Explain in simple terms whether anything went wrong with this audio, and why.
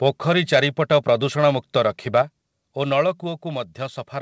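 Yes, two things went wrong, close together in the middle of this speech.

From 2.15 to 2.21 s, the loudest moment picks up a brief harsh, crackly edge. That is microphone overload. The microphone's input was likely set too high, so the strongest peaks ran past the most the converter can record and had their tops sliced flat. Only a small share of the sound was cut this way, and just barely past the limit, so the roughness is short and slight rather than a heavy buzz.

Right after, at 2.22 s, everything gets noticeably quieter at once: the speech and the background behind it drop together in a single step and stay lower. That is the microphone volume stepped down. The call software likely noticed the overloaded peak a moment earlier and turned the microphone's input level down in one move to stop it happening again. Because it was one step rather than a gradual fade, the change is abrupt.

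The audio also travelled through a normal call connection, which is why the sound lacks the very top end of its brightness.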